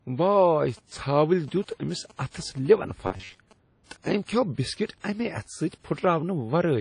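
Throughout the speech there is a ringing, washy quality with hiss that swells and fades with the signal, likely WMA compression at a low rate consistent with about 32 kbps. From 0.54 to 3.53 s a galloping dit-dit-dit of short 217 Hz buzzes sits about 25 dB below the speech. These are GSM signalling bursts from a nearby 2G phone, rectified by the audio circuit. Between 3.07 and 3.38 s the sound turns into a rigid, metallic buzz at 93.8 Hz. This robotic sound is likely from repeated short buffers, roughly 11 ms long, replaying in place of most of the real audio.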